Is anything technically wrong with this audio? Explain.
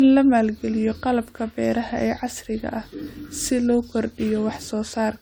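Yes. Generation loss runs throughout the speech, likely from about five AAC-LC passes at 96 kbit/s. Each re-encode quantises again on a shifted frame grid, so errors pile up into swirly, hollow, smeared sound with blurred attacks. A spectrogram shows patchy holes below 20 kHz, and waveform onsets look softened.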